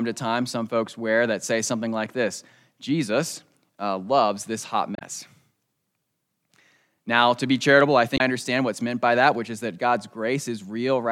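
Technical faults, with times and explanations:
4.95–5.02 s and 8.14–8.20 s, damaged data in a compressed stream: two short bursts of about 70 ms and 65 ms, heard as a chirp or blip. The first follows "uh loves this hot". The second falls between "to be charitable I" and "understand what's meant by". Corrupted bytes in the coded stream made the decoder misread those frames and lose sync. It produced garbage output until it locked onto the next valid frame header.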